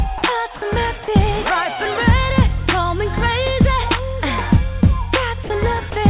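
Short gaps where the sound gives way to a steady hiss come at 0.18 to 0.22 s, 0.56 to 0.62 s, 1.04 to 1.08 s, 5.44 to 5.50 s and 5.90 to 5.92 s, each lasting 20 to 60 ms. That's likely sound dropped by the voice detector: the sender judged those moments to be background and stopped transmitting, so the receiver filled in comfort noise until the sound returned. The whole clip also tops out around 4 kHz from the call codec.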